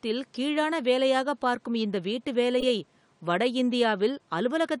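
At 0.34–0.37 s and 2.60–2.69 s, a corrupt frame was decoded: flipped bits played anyway put energy at the wrong frequencies, giving a chirp, squeak, blip or burst of noise. The second burst is longer and louder.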